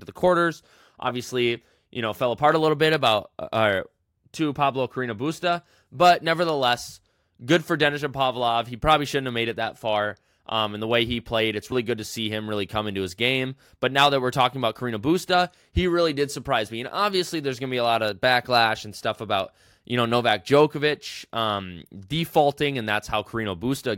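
At 11.72 s, a dropped buffer (overrun), likely overwritten before being read, removes roughly 70 ms of speech, heard as a jump before "good to see him".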